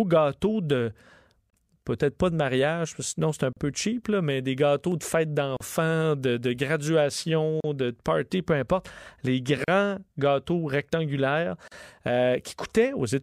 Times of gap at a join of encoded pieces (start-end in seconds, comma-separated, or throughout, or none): 1.50-1.53, 3.53-3.57, 5.57-5.60, 7.60-7.64, 9.64-9.68, 11.68-11.72